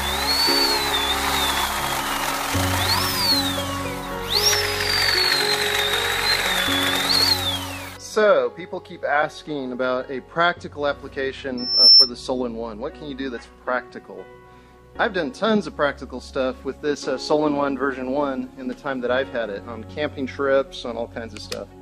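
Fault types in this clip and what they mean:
Loudspeaker feedback squeal: a microphone is hearing the loudspeaker it drives, and at one frequency the loop gain tops unity, so that tone feeds on itself. Here a single tone near 5.4 kHz appears at 11.57 s, swells over roughly a third of a second to sit about 15 dB above the surrounding sound, and holds as a squeal until it cuts off at 12.11 s.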